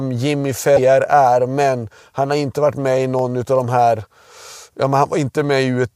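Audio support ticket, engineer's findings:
Damaged data in the compressed stream, 0.73 to 0.79 s, right before "är men han har": short disturbance of about 50 ms. Corrupt bytes in the encoded speech, so the decoder misreads those frames, loses sync and hunts for the next header. Worth checking the source file or the transport for corruption.

Single sharp clicks at 3.19 s, between "inte varit med i" and "av de här", and again at 5.44 s. Thin vertical line on the spectrogram each time. Likely dropped samples: only a handful, a fraction of a millisecond, so the waveform jumps straight to a later value.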